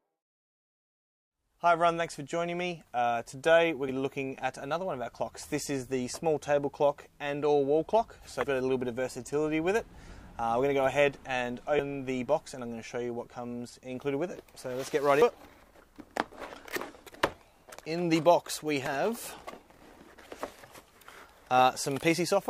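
Damaged data in the compressed stream makes the decoder lose frame sync and skip to the next header. This is heard as brief blips at 3.89, 8.43, 11.76–11.80, 15.22 and 18.86 s.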